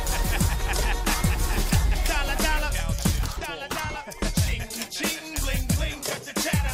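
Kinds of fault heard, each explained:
No kind of fault is heard in this audio.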